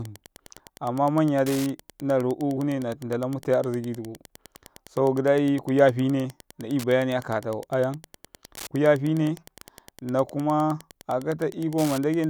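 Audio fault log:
throughout, Wi-Fi interference: a steady tick every 102.4 ms, roughly 25 dB under the speech, where a nearby radio's beacon bursts are rectified by the audio circuitry.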